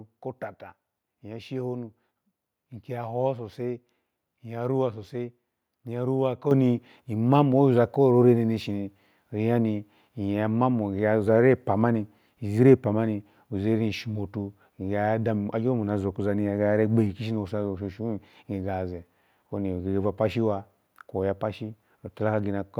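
At 6.51 s the microphone volume stepped up by about 7 dB in one jump, as the call software raised the device's input gain. Speech and background noise get louder together, and the waveform envelope and spectrogram brighten abruptly across all frequencies at that instant.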